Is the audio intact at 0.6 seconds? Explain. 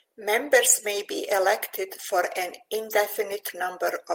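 Yes, the speech at 0.6 seconds plays through cleanly, with no dropout, click, distortion or other break at that moment.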